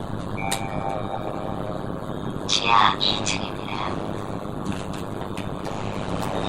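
Sounds, with overlap-add ripple throughout. The level dips by about 60 dB and recovers once per frame, around 100 times a second. This gives a metallic buzz with extra tones around each note. The frames were windowed and rejoined with an overlap whose gains don't sum evenly.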